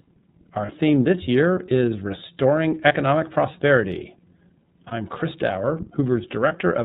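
It's a speech clip run through the iLBC codec the whole way, and you can plainly hear it: everything above 4 kHz is gone, and the voice has that slightly rough, synthetic edge. The quality fits iLBC's 30 ms frame mode at around 13.33 kbps. There are also lost iLBC frames at 0.66 s (just before "this year is"), 2.88 s, 4.89 s and 6.48 s. Each is a 30 ms gap where the decoder repeats the last pitch cycle, giving a short buzzy held vowel before the voice snaps straight back.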